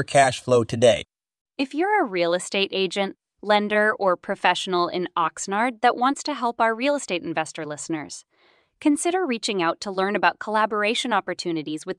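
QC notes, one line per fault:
Nothing stood out on listening to the speech in this clip.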